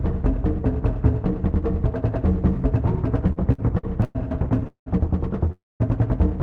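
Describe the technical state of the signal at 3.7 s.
At 3.7 s the audio is inside repeated stalls (stutter), spanning 3.27 to 4.17 s. The jitter buffer ran dry six times, and the receiver stretched the last sound over 274 ms of gaps, the longest 106 ms. It drags and hiccups. A spectrogram shows smeared, repeated frames, and the waveform shows fading plateaus.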